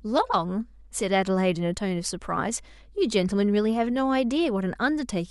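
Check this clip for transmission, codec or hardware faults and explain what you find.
One hardware fault runs through the whole speech clip: mains hum, a steady 50 Hz tone roughly 30 dB below the speech, picked up from power wiring through a ground loop or nearby transformer. A spectrogram shows an unbroken horizontal line at 50 Hz.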